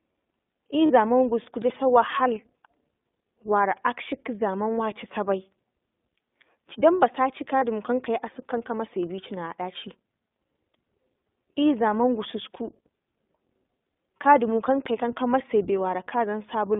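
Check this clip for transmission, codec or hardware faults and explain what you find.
Two faults are present: the whole clip carries the sound of the iLBC codec, and there are two short dropouts from lost iLBC frames.

iLBC codec, throughout: The speech passes through a narrowband line of roughly 200 Hz to 3.6 kHz. Each frame's excitation is coded on its own, and the frame timing fits 20 ms frames at the 15.2 kbps mode. The damage is plainly audible as a rough, slightly synthetic edge on the speech. On a spectrogram, energy stops sharply at 3.6 kHz and thins below 200 Hz.

Lost iLBC frames, 0.86 to 0.91 s and 7.58 to 7.64 s: Each gap holds about 40 ms of missing audio, which fits two lost 20 ms frames. The decoder fills the hole by repeating the last pitch cycle mixed with noise, so it sounds like a brief held, buzzy vowel. Because each frame stands alone, the speech recovers immediately afterwards. 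On a spectrogram, each gap shows flat, frozen harmonic stripes with a noisy wash. The waveform shows a short stretch of similar repeating cycles overlaid with noise.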